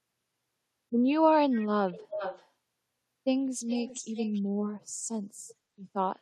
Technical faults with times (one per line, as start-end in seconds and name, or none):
1.88-2.48 echo leak
3.67-4.42 echo leak
5.48-5.55 echo leak